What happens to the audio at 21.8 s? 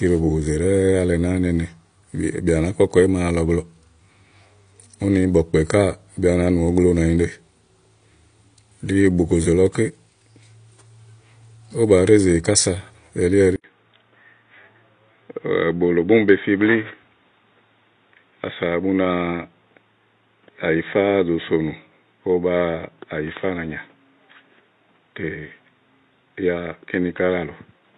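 At 21.8 s the audio sits inside a stretch running from 13.56 s to the end in which the input was likely switched to a poorer device. An 80 ms silence marks the switch. From there the speech is narrow and boxy, cut off above 3.8 kHz, and about 5 dB quieter, with a new noise floor roughly 45 dB down. A spectrogram shows a hard ceiling at 3.8 kHz; the waveform shows a brief flat gap and then a smaller envelope.

The whole clip also carries plainly audible AAC compression, likely AAC-LC at a low bitrate consistent with 32 kbps. Quantising coarse frequency frames makes the speech dull and smeared, with a warbly, fizzy edge on sibilants. On a spectrogram, content stops at 9.8 kHz.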